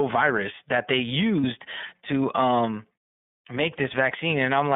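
The whole recording has passed through the iLBC codec, a narrowband VoIP coder that encodes each frame's excitation independently. The steady roughness fits its 30 ms, 13.33 kbps mode. The line is limited to about 150 Hz to 3.6 kHz, so the speech loses its bright top and low body. The coding damage is plainly audible: consonants and vowels come across slightly grainy and synthetic, with a thin, boxy, telephone-like tone.

From 1.41 to 1.44 s, between "virus that they" and "to um", there is a lost iLBC frame. The 30 ms gap points to a single dropped frame. To fill it, the decoder repeated the last pitch cycle blended with noise, so the moment sounds like a brief held, faintly buzzy vowel instead of the real sound. Because each iLBC frame decodes without needing the previous one, the speech snaps back to normal almost immediately afterward.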